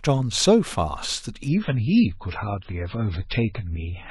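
From 1.48 s to the end, the treble vanishes above 5.6 kHz and artefacts thicken without a gap: an adaptive stream dropping to a lower bitrate, consistent with MP3 falling from 128 to 16 kbit/s.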